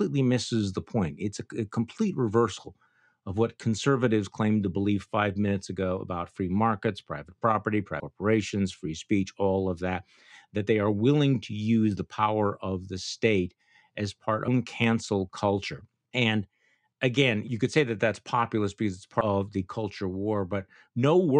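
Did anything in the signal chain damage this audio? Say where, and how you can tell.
Yes, at the codec and decoding stage: compressed frames were skipped. The speech jumps forward at 8.00 s after "free markets private property", at 14.47 s between "the state as part" and "cancel culture", and at 19.20 s after "that's populist because it's". Roughly 200 ms, half a second and 200 ms of audio go missing, which fits whole 26.1 ms frames dropped. Unlike a buffer dropout, there's no silent gap or hard click, only a brief smeared blip where overlapping frames join.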